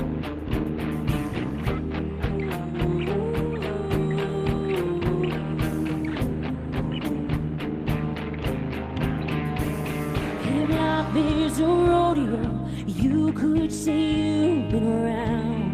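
Nothing stood out as a technical fault on listening to this clip.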